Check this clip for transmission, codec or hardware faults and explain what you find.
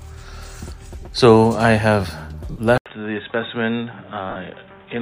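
Two kinds of fault are present: three bursts of lost LE Audio frames, and a switch to a poorer input device partway through.

Lost LE Audio frames: The Bluetooth LE Audio link dropped frames at 1.01 s for about 20 ms, at 2.51 s for about 50 ms, and at 4.30 s for about 60 ms. Those lengths fit runs of two, five and six 10 ms frames. During each gap the LC3 decoder repeats the last good spectrum with randomised phase signs. Any tonal content smears into a brief noisy wash before the stream resumes.

Input switched to a poorer device: At 2.78 s the system likely moved its input to a lower-quality microphone or a headset's call profile. The sound drops out for about 80 ms. When it returns, nothing is left above 3.8 kHz, so it sounds dull and boxy. It also comes back a few decibels quieter, with a new background noise about 35 dB under the signal, and these changes continue to the end of the clip. 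The light lossy compression on the whole recording is minor by comparison.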